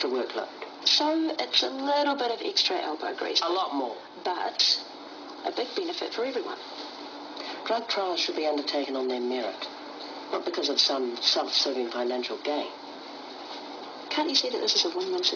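Aliasing runs through the whole clip: the audio was evidently resampled down, pointing to a rate near 11 kHz, without a low-pass filter first, so content above 5.5 kHz folds back as wrong, unrelated tones, only a little quieter than the real sound, giving high frequencies a gritty, metallic edge.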